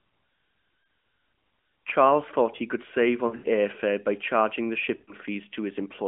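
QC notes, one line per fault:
0.84–0.88 s, lost AMR speech frames: a 40 ms gap, consistent with two 20 ms frames failing their checksum. The decoder fills the gap by repeating the last good pitch and spectral settings at lower gain, so the sound briefly dips and warbles before recovering.
3.28–3.47 s, lost AMR speech frames: 120 ms of losses spread over 160 ms, with the longest unbroken run 80 ms. Each concealed stretch re-synthesises the previous frame with decaying gain, so the sound stutters, is drawn out, then returns weak and rough.
4.96–5.13 s, lost AMR speech frames: 120 ms of losses, six 20 ms frames. The repeated parameters draw the sound out with falling gain, and it returns thin and gritty through the narrowband 200–3400 Hz channel.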